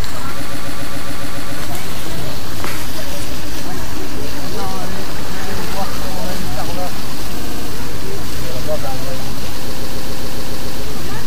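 Repeated frames make the audio stutter at 0.44–1.55 s and 9.70–10.81 s, where a 139 ms block loops eight extra times, and at 7.40–7.68 s, where a 70 ms block plays four extra times. Duplicated compressed frames reach the decoder, lengthening the audio by 1.11 s, 0.28 s and 1.11 s.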